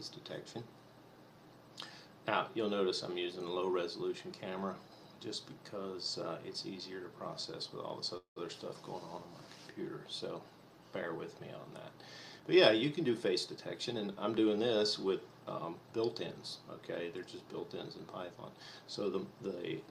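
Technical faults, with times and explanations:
8.17 to 8.38 s, call audio freeze: the likely cause is held-up packets draining the jitter buffer. The receiver stretched the last sound into a fading buzz or hiss for about 190 ms, with about 120 ms of near silence, then resumed where it stopped, adding delay rather than losing anything.
12.36 to 14.76 s, jitter buffer speed-up: the buffer was holding more audio than its target, so the receiver repeatedly cut out pitch-period-sized slices, roughly 200 ms in total. The audio runs about 8 percent faster at unchanged pitch, sounding hurried.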